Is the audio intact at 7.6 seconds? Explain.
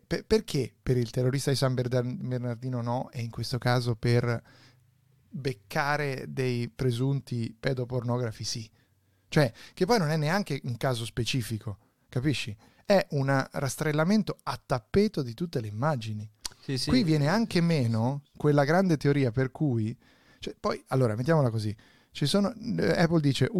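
Yes, at 7.6 seconds the audio is intact, with no dropout, click, distortion or other fault at that point.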